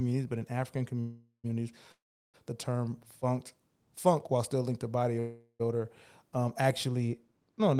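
At 1.00, 1.92 and 5.19 s (that last one right after "still linked to body") there's a call audio freeze: roughly 0.4 s where the last sound buzzes and fades, going nearly silent in the second one, before picking up intact. The likely cause is delayed packets draining the jitter buffer. From 6.88 s, after "to body odor um", de-emphasis is applied wrongly, so there's a treble cut of about 8 dB at 10 kHz that muffles the ending.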